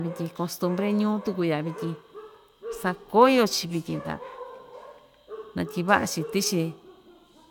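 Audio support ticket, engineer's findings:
No faults found on listening; the speech comes through with nothing to log against any component.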